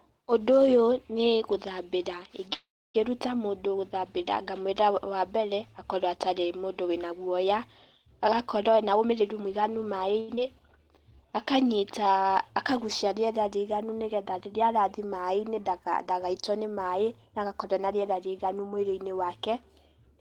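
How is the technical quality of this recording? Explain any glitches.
The recording has several timing glitches from a network call path, clustered around 10 s, plus an early freeze and a late speed-up.

From 2.53 to 2.96 s, right after "ũyũ nĩ gũthabĩra", there is a call audio freeze. The last sound carries on briefly and then drops to silence for about 0.28 s before resuming at "mũndũ gũthabĩra ngamwĩra wa". The likely cause is delayed packets draining the jitter buffer, which adds about 0.41 s of gap while losing nothing.

There are two jitter buffer speed-ups, from 8.68 to 10.15 s and from 17.73 to 19.25 s, the second starting after "dagaitwo nĩ maaĩ agakorwo". Each time the receiver trimmed pitch-period-sized pieces to shrink excess buffered delay. This removed roughly 0.3 s in the first stretch (123% speed) and about 0.15 s in the second (109% speed). Pitch stays unchanged, but the speech sounds hurried, noticeably so in the first stretch.

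From 10.2 to 10.3 s, a short stall from a late packet makes the receiver stretch the current sound by 81 ms until the data arrives. The sound is held slightly too long, and nothing is lost.

At 10.36 s, a skip ahead discards roughly 100 ms of audio, dropped either in transit or by the buffer while newer packets waited. Playback jumps forward almost seamlessly.

From 10.84 to 11.81 s, a jitter buffer slow-down repeats single pitch periods to rebuild the buffer's reserve, adding 95 ms. The speech plays at 91% speed with unchanged pitch and sounds drawn out.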